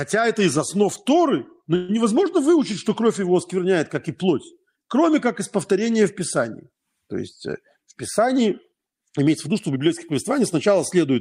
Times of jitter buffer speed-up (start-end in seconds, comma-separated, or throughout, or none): 7.76-9.76